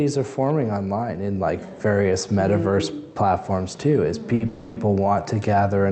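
Audio carried over a call link, with the Opus-style codec band-limiting everything to about 8 kHz, shows two timing faults close together. At 4.35 to 4.42 s there is a short stall from a late packet: the last sound is held for about 50 ms with a slight buzz or dip, then continues from the same place, so nothing is lost, unlike a dropout, which would skip material. From 4.46 to 4.78 s a call audio freeze follows, a fading buzz or hiss filling about 300 ms that never reaches silence. It was likely caused by packets held up in transit draining the jitter buffer, and it is set apart from the stall by its length and its decaying texture.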